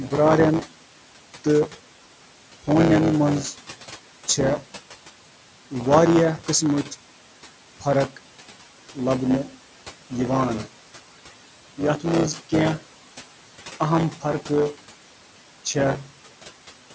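Buffer tearing runs through the whole speech clip. A hard-edged 100 Hz rattle rides on the speech and drops out in pauses. Writer and reader have slipped inside a ring buffer. About a tenth of each 10 ms period replays audio roughly 20 ms old.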